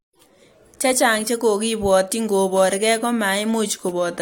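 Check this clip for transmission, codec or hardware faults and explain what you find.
No faults found.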